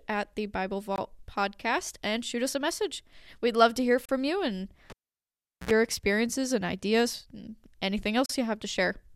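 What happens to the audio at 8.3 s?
At 8.26 s the speech drops out, and it returns at 8.29 s. That is a gap at a join of encoded pieces, about 36 ms long. The clip was encoded in separate sections and spliced without trimming. The encoder's start-up delay and the padding of the last frame both stayed in, leaving a hole in continuous sound. The codec blurs the gap's edges. Then the speech carries on from where it stopped.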